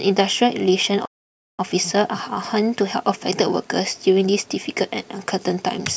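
A playback stall hits this speech recording: the player likely starved of data or had its thread blocked, so output drops to silence from 1.05 to 1.59 s, a gap of about 534 ms that cuts the speech off mid-flow before sound returns.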